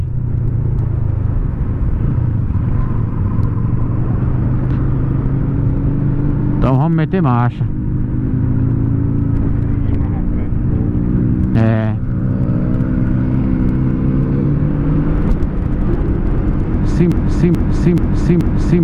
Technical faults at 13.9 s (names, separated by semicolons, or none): none